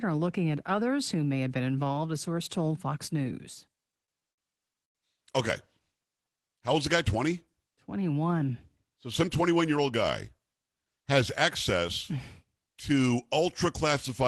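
Repeated stalls (stutter), 3.75 to 4.97 s: the jitter buffer ran dry seven times, and each gap of up to 99 ms was filled by stretching the last sound, so the speech drags and stutters without losing anything.

Jitter buffer slow-down, 6.17 to 6.49 s: rebuilding its reserve, the receiver repeated pitch periods, adding 61 ms and dropping the speech to 84% speed at unchanged pitch.

Jitter buffer speed-up, 8.41 to 10.31 s: carrying excess delay, the receiver trimmed short pitch-period pieces, about a tenth of a second in total, so the speech runs at 105% speed and sounds hurried.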